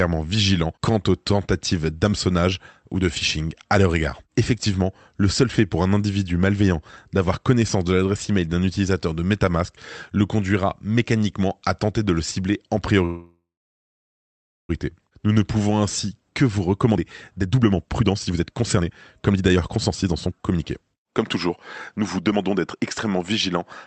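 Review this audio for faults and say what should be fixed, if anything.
From 13.05 to 14.71 s the speech smears into a fading buzz, then about 1.25 s of silence, and resumes exactly where it stopped. This call audio freeze, likely from delayed packets draining the jitter buffer, differs from a dropout because nothing is skipped.

From 16.87 to 21.51 s the speech runs at 127% speed, and from 21.98 to 23.61 s at 117%, with pitch unchanged. This jitter buffer speed-up trims pitch periods to shed roughly 1.5 s and a few tenths of a second of backlog. Resampling would raise the pitch instead.

Stabilising network delay, or giving the jitter buffer more headroom and letting it catch up more gently, would prevent both faults.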